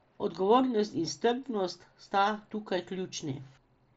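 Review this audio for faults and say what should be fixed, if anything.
No faults turned up in the review, so nothing needs to be fixed in this speech audio.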